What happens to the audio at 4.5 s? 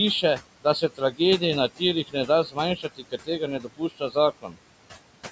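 Right around there, from 4.41 to 4.59 s, you get speech cut by the noise suppressor. It mistakes part of the talking for background and pulls it down by about 18 dB, so for roughly 150 ms the sound goes faint and swallowed before recovering.

That sits on top of the noise suppressor artifacts running through the whole clip. The same processing lowers the room noise by about 18 dB frame by frame, and the room noise, about 16 dB below the speech before that cut, sinks between the words and rises under them.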